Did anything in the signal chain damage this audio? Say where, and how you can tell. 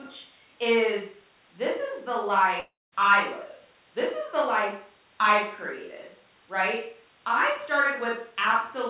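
Yes, at the network stage: a long network dropout from 2.6 to 2.94 s, likely caused by packet loss on the call path. About 0.32 s of sound never arrives. The receiver extends the last sound as a fading buzz, then roughly 0.2 s of near-silence follows before the audio resumes with the gap missing. Throughout, content stops at 4 kHz, consistent with a G.711 mu-law call codec at 64 kbps.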